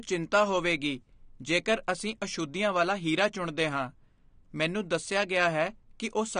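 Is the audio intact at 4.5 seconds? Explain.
No. At 4.5 seconds, as across the whole speech clip, the sound is dull and smeared, with nothing above 9.7 kHz and a fizzy, warbling texture on sibilants. This is likely AAC compression, with AAC-LC quantising coarsely at a rate consistent with about 32 kbps.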